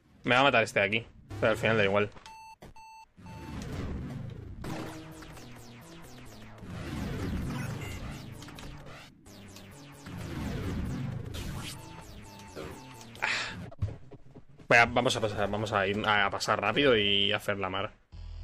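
Nothing in this audio stands out as a technical fault, so there's nothing here to walk through.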